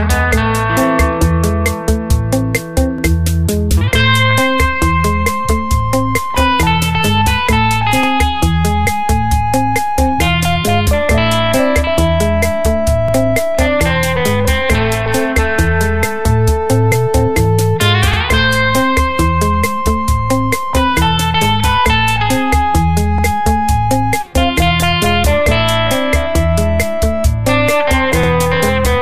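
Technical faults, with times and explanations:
2.98–3.03, 8.03–8.08, 13.08–13.13, 18.13–18.18, 23.18–23.23 and 28.23–28.28 s, overlapping chunks: the audio was handled in 5-second blocks, and each new block begins 50 ms before the previous one finished, so that 50 ms slice plays twice at every join. The repeat breaks the waveform's continuity, producing a brief stutter or click that recurs at a steady, slightly-over-five-second rhythm across the clip.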